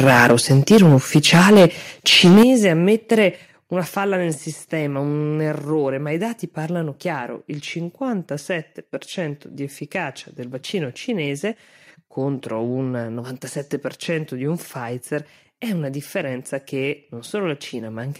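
From 0.0 to 1.66 s the speech shows microphone overload, likely from input volume set too high, driving peaks about 8 dB past the converter's limit. A small share of samples is flattened, so loud syllables carry a harsh crackle. The waveform shows squared-off tops, and the spectrogram shows broadband smearing above the harmonics. At 0.32 s the microphone volume steps down by about 2 dB, likely the call software reacting to the clipping, and the level dips abruptly. From 2.11 to 2.43 s the overload returns, about 7 dB over, with roughly a fifth of samples clipped, so the crackle is denser. At 2.43 s, just before "ammettere una falla nel", the volume drops by about 8 dB, a sharp fall in the waveform envelope. Further steps of about 4 dB at 3.45 s and about 2 dB at 4.47 s follow, the latter between "ammettere una falla nel" and "un errore ma i". Each shows as a sudden, uniform darkening across the whole spectrogram.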